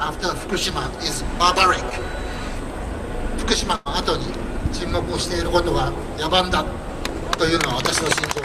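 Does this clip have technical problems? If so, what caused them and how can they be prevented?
Yes. A short concealed packet loss falls between 1.89 and 2.00 s. About 20 ms of audio failed to reach the decoder in time, and the receiver patched roughly 15 ms of the hole by extending the sound just before it, then crossfaded back into the real signal. The patch stretches timing by a few milliseconds and is heard as a brief smear or wobble rather than a clean dropout. A larger jitter buffer or forward error correction would prevent it.

A burst of packet loss follows from 3.76 to 3.87 s. About 100 ms went missing in a row, longer than concealment can hide, so the receiver repeated the last sound for about 98 ms while fading it down. The result is a held, dying buzz or hiss, after which the audio resumes further along with that stretch gone. A more stable network path, or redundancy such as forward error correction or interleaving across packets, would prevent it.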